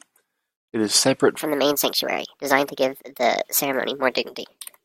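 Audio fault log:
1.40–4.84 s, section at the wrong speed: right after "is separate" the speech suddenly turns higher and hurried, rising by about five semitones and running 1.37 times faster until the end of the clip. Because pitch and tempo jump together at a single point, this part was likely played back against the wrong clock, so each second of the original recording is squeezed into roughly three quarters of a second, lifting the voice's pitch as it speeds up.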